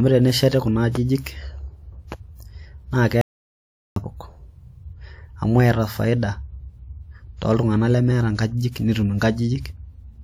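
At 3.21 s the speech cuts out abruptly and the track falls to dead digital silence until 3.96 s, with no room tone or background left in the gap. About 750 ms of the talker's speech is simply missing before the sound resumes mid-flow. This is an audio dropout to silence: the input signal was likely lost for that stretch, through a disconnected link or momentary mute, while the recorder kept writing silence.

Right after "iltung'anak lemeeta", at 8.71 s, a short hiss rises just ahead of a sharp onset, lasting about 44 ms until 8.76 s, and the attack itself sounds softened and smeared. This is pre-echo from a transform codec. The block containing the transient had its quantisation noise set for the loud attack, and that noise was spread evenly across the block, so it landed audibly in the quiet moment before the onset.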